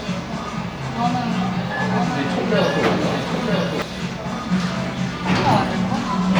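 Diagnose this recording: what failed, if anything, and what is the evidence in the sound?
From 0.96 s to 3.82 s every event in the sound is followed by a second full-band copy arriving about a second later and somewhat quieter, around 5 dB down. The copy has no decay tail or added room colour, and it appears and disappears abruptly at both ends. That is a doubled audio track. The likely cause is a second, slower capture path or an out-of-step edit, which mixed a delayed duplicate of the same material into the recording.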